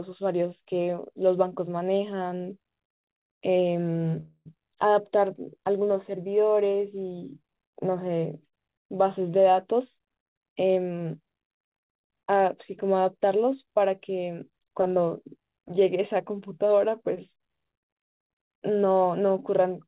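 At 4.2 s the sound stalls until about 4.48 s. A buzzy continuation of the last sound is stretched for roughly a quarter second and fades into 30 ms of silence, and then the audio resumes where it stopped. This is a call audio freeze, likely from packets delayed long enough to empty the jitter buffer. Nothing is lost, but the stream now runs about 255 ms later.

From 9.73 s to 12.14 s the speech plays at about 110% speed with its pitch unchanged, so that stretch sounds hurried. This is a jitter buffer speed-up. The receiver trims short pitch-period slices over and over to work off excess buffered delay, removing about a third of a second in total. Throughout, the narrowband call path cuts everything above 4 kHz, which fits G.711 at 64 kbps.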